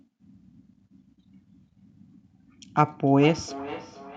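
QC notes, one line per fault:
1.37–4.17 s, feedback echo between two devices: from here to the end, the speech returns at a fixed spacing of roughly 0.4 s, the loudest repeat sitting about 18 dB below the direct sound. A second device in the same room is playing back this microphone's signal, and the microphone picks it up again. The echo canceller only subtracts what its own loudspeaker emits, so this foreign playback passes through as a regular delayed copy.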